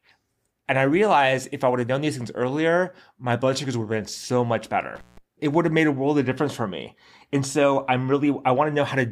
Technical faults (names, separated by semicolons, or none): intermittent contact